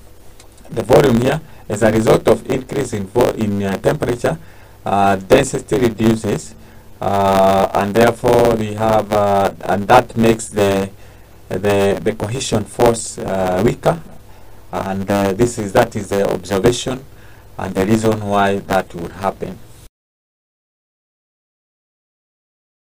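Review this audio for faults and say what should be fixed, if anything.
A block size mismatch (truncated) runs through the whole clip. A 100 Hz buzz marks the block rate, and the audio plays about 1.09 times fast at roughly normal pitch, because each block written is longer than the next stage reads and the tail of every block is discarded. Prevent it by making both stages agree on one block size and checking that setting whenever the processing chain is configured.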